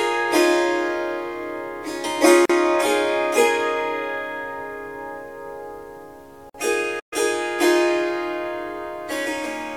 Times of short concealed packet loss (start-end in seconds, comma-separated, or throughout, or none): none